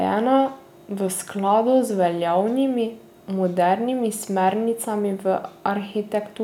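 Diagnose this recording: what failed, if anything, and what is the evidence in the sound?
Nothing in the recording points to a failure at any stage between capture and playback; the speech signal holds together as one continuous, undisturbed stream.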